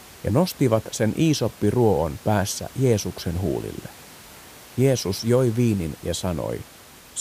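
No technical faults can be heard in the speech, with only the recording room's own background noise sitting about 23 dB below it.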